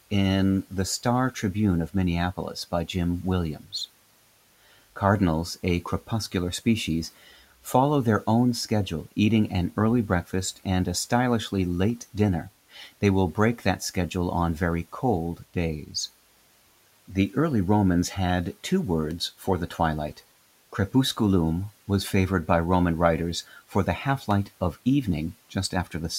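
A speech recording carries three electrical switching spikes, each a sharp snap at 11.90 s just after "breakfast and a stylishly", at 19.11 s between "had two" and "for the twilight", and at 24.31 s. They are likely pickup from a nearby switch or motor arcing. Each shows as a lone, near-vertical line through every frequency on a spectrogram and a brief spike on the waveform, over room noise sitting about 28 dB below the speech.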